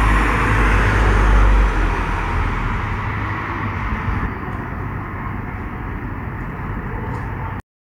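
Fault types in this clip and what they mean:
Cut-off end: the everyday sound is chopped mid-event at about 7.60 s and drops straight to dead digital silence with no natural decay. That's what you get when the final buffers never got written or played, leaving roughly a third of a second empty.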